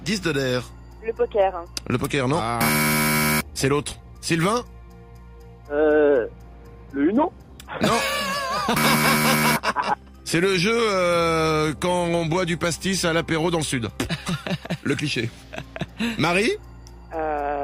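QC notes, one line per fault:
No faults heard.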